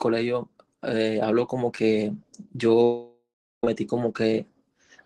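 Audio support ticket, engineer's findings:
Long network dropout, 2.83–3.64 s: about 0.8 s of audio lost. The last sound is stretched into a fading buzz, then about 0.37 s of near-silence, then the audio resumes with that stretch gone. Likely cause: packets stopped arriving and the receiver's concealment ran out. Unlike a short packet-loss glitch, this gap is long enough to go silent. Unlike a mute or gate, a decaying synthetic tail comes first. The call path carries Opus-style coding noise and rolls off above 12 kHz, consistent with a roughly 20 kbps setting.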